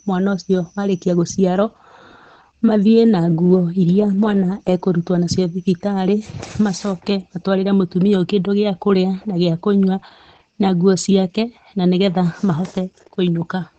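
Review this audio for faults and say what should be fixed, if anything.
Opus voice compression runs through the whole speech recording. The damage is plainly audible: speech sounds muffled, hoarse and faintly robotic, which fits the SILK coder at a low bitrate around 12 kbps squeezing the excitation coarsely. On a spectrogram, energy stops flat at about 9 kHz with an empty band above, and harmonics look smeared and blocky in steps that fit 20 ms frames. To prevent it, encode at a higher bitrate or keep an uncompressed master.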